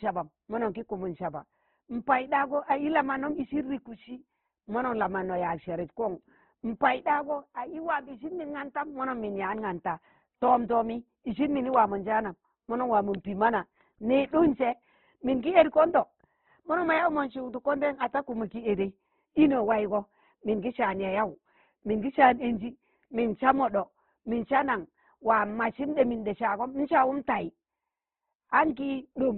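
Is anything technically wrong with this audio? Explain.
Yes. Throughout the speech there is heavy damage consistent with Opus compression, likely from a low-rate encode in its music (CELT) mode. Nothing survives above about 4.1 kHz, so the audio is narrowband and dull, and the character points to roughly 12 kbps. With so few bits, bands are filled by folding or noise, leaving tones grainy and rough. A spectrogram shows a hard ceiling near 4.1 kHz with smeared, noisy texture beneath it.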